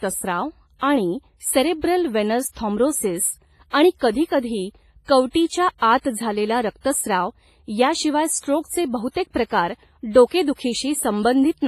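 Throughout the speech the sound has a ringing, washy quality, with a hiss that swells and fades along with the signal. Quiet detail drops out, and nothing remains above about 15.3 kHz. The damage is heavy and is likely WMA compression at a low bitrate, which fits a rate around 24 kbps. The transform encoder smears its quantisation noise across long blocks, so the noise trails each sound, and it discards weak spectral lines entirely.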